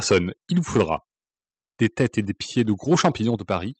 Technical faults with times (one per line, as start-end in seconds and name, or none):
0.10-0.18 microphone overload
0.12 microphone volume stepped down
0.76-0.93 microphone overload
2.59-2.62 microphone overload
2.91-3.09 microphone overload
3.36 microphone volume stepped down
3.52-3.56 microphone overload